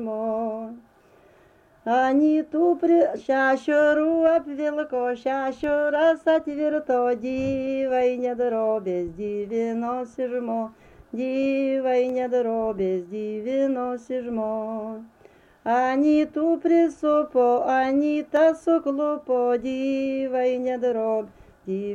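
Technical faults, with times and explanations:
5.64 s, 12.09 s and 18.37 s, dropped samples: the stream likely lost a tiny run of samples at each of these points, a fraction of a millisecond's worth, so the waveform leaps straight from one value to a later one with nothing in between. That gap is far too brief to remove any audible sound, but the abrupt step produces a single sharp click each time, showing as a thin vertical line across the whole spectrum.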